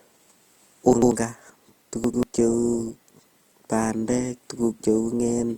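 The whole clip was likely passed through an Opus encoder in its music (CELT) mode at a tight bit budget, consistent with something near 24 kbps. Opus compression keeps each band's energy but fills starved bands with folded or noise-like content, so the speech sounds rough and grainy, with a plainly audible hiss-like texture. The bandwidth stays full, with content reaching about 20.2 kHz.

At 0.93 s, chunks out of order begin. A block of roughly 93 ms was delivered one chunk late, so it plays after the block that should follow it. The sound through 1.12 s is briefly jumbled, with hard joins. The same fault recurs from 2.04 to 2.23 s, again a single 93 ms chunk swapped one place late, giving a second garbled moment.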